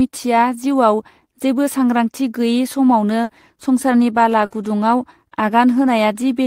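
At 3.23 s and again at 4.45 s the speech briefly smears into a held, fading sound for about 60 ms before jumping ahead. Each is a burst of packet loss lasting roughly 80 ms. Several packets in a row never arrived in time, so the receiver stretched the last sound it had and let it die away. When audio resumes, about 60 ms of the speech is simply gone.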